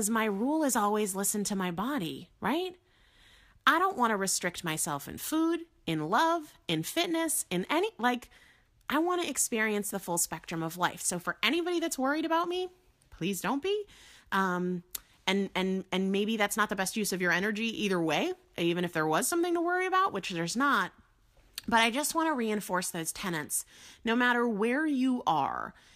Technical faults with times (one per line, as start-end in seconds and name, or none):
none